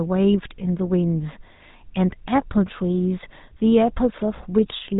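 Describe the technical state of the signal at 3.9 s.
At 3.9 s, GSM full-rate codec damage is present, as it is across the whole clip. The speech is rebuilt from a vocal-tract model driven by sparse regular pulses. Nothing passes above 3.8 kHz. The plainly audible result is a buzzy, gravelly roughness.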